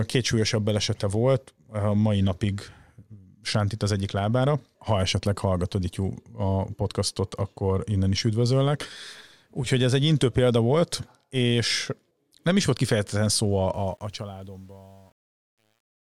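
From 13.74 s to the end at 16.08 s, the fade-out of the speech shows truncation distortion on a fade. Undithered, coarse steps fit roughly 9-bit resolution. From 14.32 s it turns gritty. The waveform shows square stair-steps, and the spectrogram shows scattered broadband grit.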